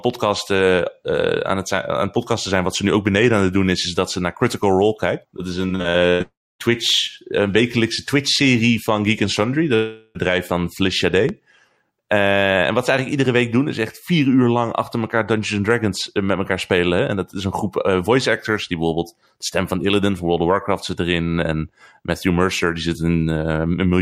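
From 5.67 to 6.22 s, repeated packet loss leaves five holes, the longest 98 ms, and the receiver patches about two-fifths of that stretch by extending the last sound. The speech turns choppy, with pieces missing. At 6.22 s it runs straight into what is likely a long network dropout. The last sound is continued as a fading buzz, then 270 ms of silence follows until the speech returns at 6.61 s with that portion gone.

A second long network dropout, again likely, hits from 9.75 to 10.17 s. This time the concealment covers the whole gap, so the speech is replaced by a stretched, smeared tone with no silent stretch before it resumes.

At 11.29 to 11.31 s, a loud pop, likely from a sudden voltage step such as a switch or static discharge, lands on top of the speech as a single sharp click a few decibels above it.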